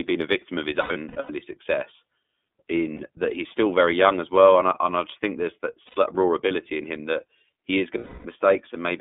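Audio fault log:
throughout, iLBC codec: The speech passed through the narrowband iLBC VoIP codec, which codes each frame's excitation on its own. The line is band-limited to roughly 200 Hz to 3.6 kHz, so everything above 3.6 kHz is gone, and the damage is plainly audible. The rough, slightly synthetic grain is consistent with the codec's 13.33 kbps mode using 30 ms frames.
0.81–1.30 s, 2.95–3.00 s, 5.87–5.98 s, 7.98–8.25 s, lost iLBC frames: Packets went missing, and the decoder covered each gap by repeating the last pitch cycle blended with noise. Each gap is heard as a held, faintly buzzy or breathy vowel. The first stretch loses 300 ms scattered across 480 ms, the longest unbroken loss lasting about a tenth of a second. The others last 60 ms, 90 ms and 270 ms, and clarity returns almost immediately after each.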